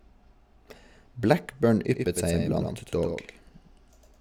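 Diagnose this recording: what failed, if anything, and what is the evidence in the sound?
From 1.90 s to the end, every syllable has a flat echo about 5 dB quieter and about a tenth of a second behind it, switched on abruptly, with no decay or room colour. This doubled audio track likely comes from a second, slower capture path mixed into the recording.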